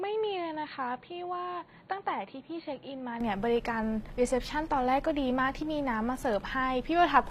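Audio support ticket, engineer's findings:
Whole clip: plainly audible codec damage in the treble. Upper band sounds synthetic; harmonics do not line up above the crossover. Likely component: HE-AAC compression, v2 profile. Mechanism: only the lower spectrum is coded. Treble is rebuilt by spectral band replication, meaning lower bands are copied upward and shaped by a coarse envelope. Damage fits a low bitrate around 24 kbps.

0.0 to 3.2 s: band-limited, dull speech. Nothing above 4.5 kHz. Level about 5 dB lower, with its own noise floor far below the signal. Full band returns at 3.2 s, with no gap at the change. Likely component: input switched to a poorer device, another mic or a headset call profile. Mechanism: narrower passband, different gain and noise.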